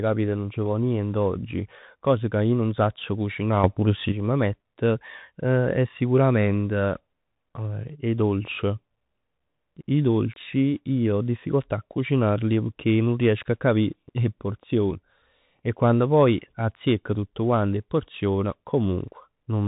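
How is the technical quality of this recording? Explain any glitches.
The recording has two clear technical problems: narrowband Bluetooth headset coding throughout and a brief level jump.

Throughout, the speech carries the Bluetooth CVSD headset codec sound. Nothing passes above about 3.8 kHz, which fits a 64 kbps CVSD link. Its one-bit adaptive steps leave scratchy sibilants and granular hiss, unlike a plain low-pass filter.

From 3.64 to 4.12 s there is a sudden gain jump of about 8 dB. Speech and background noise rise together instantly, likely from gain applied without a ramp, rather than a gradual fade.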